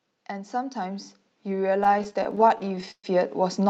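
From 0.29 s to the end, the level climbs steadily. This is automatic gain rising. The gain control judged the input too quiet and kept raising its gain. The voice and the background swell together, so the noise floor creeps up along with the speech. The change is gradual, spread over more than three seconds. No single jump stands out. The whole clip simply grows louder as it runs.

Between 1.79 s and 3.06 s, the speech stalls repeatedly. This is a stutter from repeated stalls. Packets arrived late or too slowly, and the jitter buffer ran dry over twenty times. Each time, the receiver stretched the last sound to cover the wait. About a quarter of that stretch is filled this way, roughly a third of a second in all. The longest hold lasts 126 ms and fades. Nothing is lost, but the speech drags and catches. The band stops at 8 kHz throughout, which fits an Opus call path.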